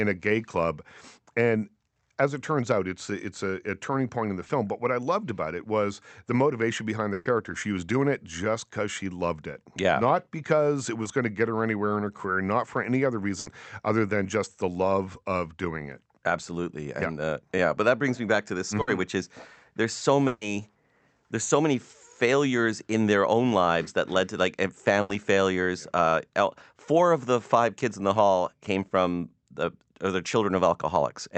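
At 4.47 to 4.51 s comes a short concealed packet loss. About 20 ms of the stream arrived too late to decode, and the receiver bridged the hole by extending the preceding sound before easing back into real audio. It registers as a brief smear or wobble. The same happens at 11.03 to 11.07 s, between "because it" and "going to get her".

Bursts of packet loss occur at 7.13 to 7.27 s (after "was the motivation behind"), 13.39 to 13.47 s (between "not for any other" and "other than just the"), 18.81 to 18.89 s, 20.27 to 20.43 s and 25.01 to 25.11 s. Each spans 60 to 140 ms of consecutive lost audio, filled by concealment. At 7.13 and 20.27 s there is no silence. The last sound is stretched into a decaying buzz or hiss, and then the speech resumes further along, with that stretch missing. The longer gaps are at 7.13 and 20.27 s. Throughout, the Opus call path tops out around 8 kHz.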